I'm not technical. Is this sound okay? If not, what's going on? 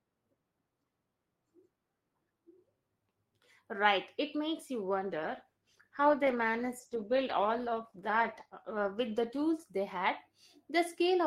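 No. There's a call bitrate drop from about 5.01 to 9.51 seconds. During that stretch the call decided the connection had less room than before, so it squeezed the audio into far fewer bits, staying at that reduced level for nearly the whole stretch. Squeezing that hard means finer detail gets thrown away and the crisp top end is trimmed, so the speech sounds rougher and more muffled until the quality climbs back near the end.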